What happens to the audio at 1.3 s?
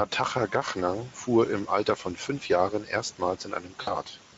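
Speex codec damage is present at 1.3 s and runs through the whole clip. Too few bits go to the excitation signal, consistent with a low setting near 17 kbps, so the speech at that moment sounds plainly noisy and hoarse.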